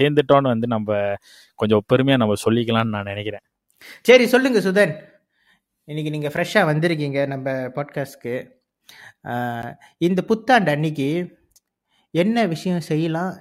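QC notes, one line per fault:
6.36 s and 9.62 s: block of digital silence, abrupt 4.6 ms and 10.7 ms gaps (second fits a 512-sample buffer) heard as a tick or dip, being under about 15 ms; waveform flatlines, spectrogram shows thin vertical stripes.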